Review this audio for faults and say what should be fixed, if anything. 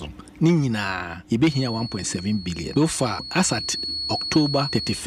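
A feedback whistle enters at 1.42 s and continues to the end of the clip: a thin, steady tone at 4.4 kHz sitting about 10 dB below the programme, swelling and fading slowly in level but never building up. The likely cause is a loudspeaker-to-microphone loop running just at the edge of instability, so that single frequency keeps recirculating without tipping into full howl. To prevent it, reduce monitor gain or reposition the microphone relative to the loudspeaker, and notch the 4.4 kHz region on that channel.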